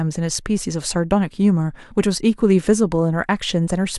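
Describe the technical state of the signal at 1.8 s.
At 1.8 s you're in the middle of a run of clock slip clicks spanning 0.28 to 3.58 s: around seven faint, regular ticks about every half second. The likely cause is two unsynced clocks drifting by a few tens of ppm, so a single sample gets dropped or repeated each time.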